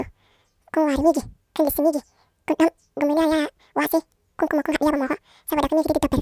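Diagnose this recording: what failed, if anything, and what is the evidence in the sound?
The speech runs at double speed and sits a full octave high from start to finish, so it's a wrong sample rate problem at the playback stage. The samples go out unconverted at twice the intended rate, which fits 16 kHz material being clocked out at 32 kHz.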